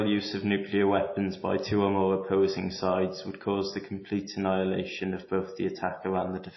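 Throughout the speech, the audio carries plainly audible MP3 compression, likely from an encoder starved of bits, which fits a low bitrate of around 24 kbps. With so little data per frame, the encoder cuts the treble entirely above 5.8 kHz and drops weak frequency components that flicker on and off between frames. The result is a dull, band-limited sound with a watery, swirling texture, chirpy metallic edges on s sounds, and softened consonant attacks.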